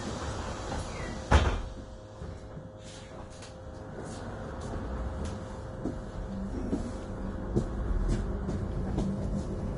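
An everyday sound recording that is hissy and grainy from start to finish, with roughened tones, smeared attacks and nothing above 10.6 kHz. This is likely Vorbis compression at a low setting, consistent with roughly 30 kbps, where the encoder lowers the cut-off and quantises the remaining treble into noise.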